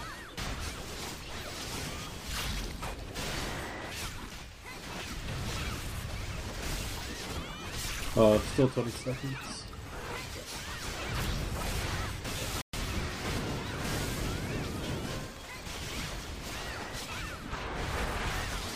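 At about 12.61 s the audio just drops out for roughly 120 ms, a playback stall, coming back at 12.73 s. It's a clean gap in mid-flow rather than a click, most likely the player running dry or its thread getting blocked briefly.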